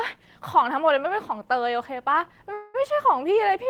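A call audio freeze runs from 2.53 to 2.76 s. For about 0.21 s the last sound is stretched into a fading buzz or hiss. The likely cause is delayed packets draining the jitter buffer. The speech then resumes where it stopped, with nothing lost, just later.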